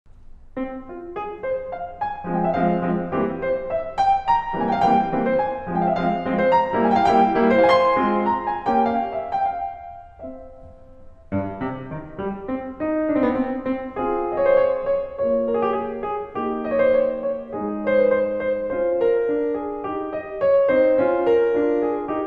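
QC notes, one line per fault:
Throughout: MP2 compression. The music sounds dull and gurgling, with a grainy edge and upper treble that flickers in and out. This is likely MPEG Layer II coding starved of bits, consistent with roughly 80 kbps, switching off high sub-bands and coarsely quantising the rest.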